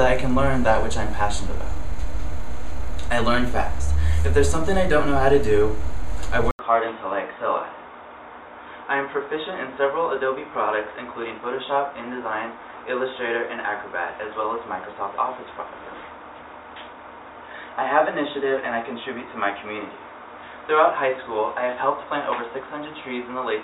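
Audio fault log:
6.51 s to end, input switched to a poorer device: the input likely moved to a narrower-band microphone or headset profile, so after an 80 ms gap the sound turns dull and boxy, cut off above 3.8 kHz, roughly 10 dB quieter, with fresh background noise underneath.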